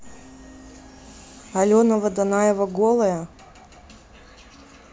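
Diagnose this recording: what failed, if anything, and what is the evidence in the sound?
No fault found in this recording.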